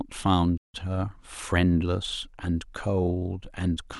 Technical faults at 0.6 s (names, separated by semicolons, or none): playback stall